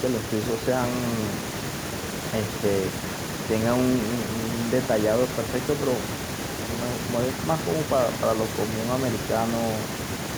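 Listening through this speech recording, nothing technical stood out as wrong at any point.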